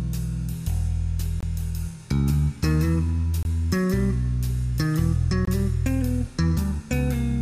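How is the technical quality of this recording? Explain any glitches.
The recording has three brief dropouts, each a gap between chunks. At 1.41–1.43 s, 3.43–3.45 s and 5.45–5.47 s the sound stops for 23 ms, every 2.0 s, because silence is inserted where one chunk of audio joins the next, though none of the sound itself is lost. Each gap is heard as a short, hard-edged hole. On a waveform these are flat, sharply cut sections, and on a spectrogram they are thin, blank vertical stripes spaced at regular intervals.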